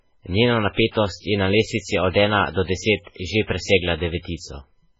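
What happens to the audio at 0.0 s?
From the very start the speech sounds watery and swirly, likely MP3 compression at a very low bitrate. The spectrogram shows a hard ceiling at 7.6 kHz and flickering gaps below it.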